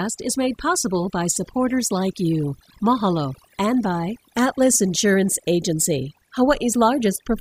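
Overdone noise removal runs through the whole clip. The noise reduction was set too strong. It cuts individual frequency bands far down or out whenever they sit near its noise estimate. The background falls away and breaks into twinkling, warbling specks. Quiet parts of the speech are lost along with it.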